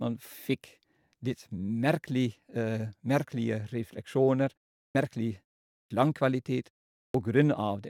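Three times the speech jumps in abruptly out of a pause, its opening sounds missing: at 4.88 s (about 69 ms lost), 5.84 s (about 65 ms) and 7.07 s (about 74 ms). Each follows a silence of roughly 0.4 to 0.5 s. This is a clipped start after a pause: the output device drops into a sleep state during the gap and needs a moment to wake and relock, so the first sound is swallowed before playback resumes.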